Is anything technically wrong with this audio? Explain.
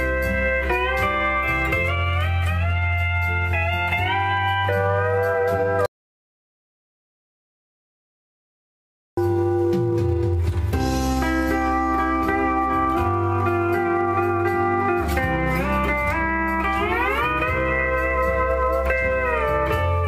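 Yes. From 5.86 to 9.17 s the sound cuts off abruptly into dead, total silence with no room tone, then resumes mid-flow, losing about 3.3 s. This audio dropout to silence was likely caused by the input disconnecting or muting while the recorder kept writing zeros.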